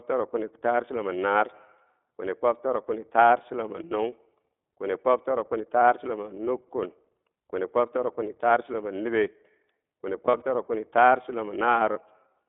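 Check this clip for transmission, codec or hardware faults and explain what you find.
Two faults are audible: iLBC codec coding throughout the speech, and two brief patches of lost iLBC frames near the end.

The iLBC codec affects the whole clip. The speech sounds boxy, slightly rough and synthetic, confined to about 250 Hz to 3.6 kHz. Its 20 ms frames are coded independently, which fits iLBC's 15.2 kbps mode.

Lost iLBC frames occur at 10.26 to 10.43 s, where short buzzy, held-vowel fills are scattered over 160 ms, totalling about 100 ms, in runs of a few tens of milliseconds. At 11.92 to 11.98 s there is one 40 ms fill. In both places the decoder repeated the last pitch cycle with noise, and the speech recovers immediately afterwards because each frame decodes on its own.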